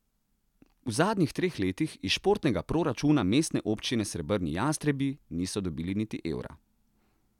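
No technical faults are audible.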